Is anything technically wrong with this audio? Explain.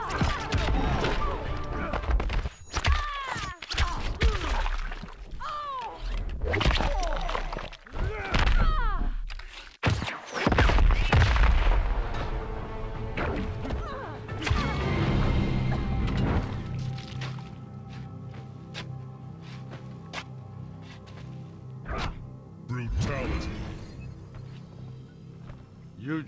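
No, nothing technically wrong.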